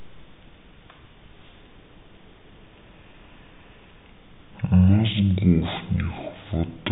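Stereo read as mono runs through the whole of this speech clip: interleaved left and right samples are played back one after another as a single channel, so the speech plays at half speed and a full octave (12 semitones) low, with a faint mirrored image in the upper spectrum.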